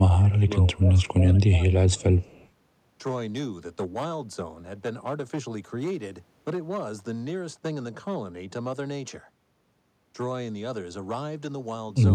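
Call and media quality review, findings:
Hard clipping, whole clip: crackle on speech peaks. Peaks driven about 8 dB past full scale, flattened tops on a small share of samples (around 2%), adding high harmonics. Probable component: gain stage or converter ahead of encode.

Speech suppressed in double talk, 0.0–2.36 s: speech ducks and thins in patches, dipping by around 15 dB, roughly 1.5 s affected in total. Likely cause: echo canceller unable to separate near talker from far-end echo during overlap, attenuating both.

Echo leak, 1.0–1.09 s and 2.22–2.48 s: faint delayed copy of the speech, 138 ms behind, very low, around 35 dB under the direct speech, brief scraps only. Likely cause: loudspeaker endpoint's echo canceller leaving residual pickup, returned to the sender.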